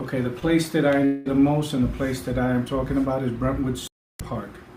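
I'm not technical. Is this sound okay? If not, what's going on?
No, there are two moments where the sound breaks up.

At about 0.39 to 0.44 s there is a short concealed packet loss. A tiny piece of the audio, about 20 ms, arrived too late to be played. The receiving device covered the gap by stretching the sound that came just before it, then joined back up with the real audio. You hear it as a very quick smear or wobble.

From about 1.06 to 1.27 s there is a longer break. This is likely a long network dropout. About 200 ms of audio never came through. The device kept the previous sound going for that whole stretch, so there is no dead silence. Instead there is a drawn-out buzz or hiss that fades. When the sound resumes, the part that was lost is simply gone.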